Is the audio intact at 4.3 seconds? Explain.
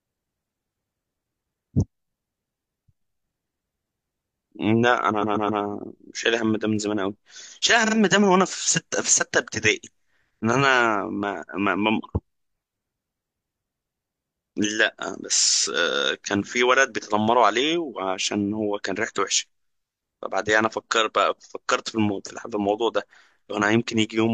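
Yes, the speech at 4.3 seconds is intact, with no dropout, click, distortion or other fault at that moment.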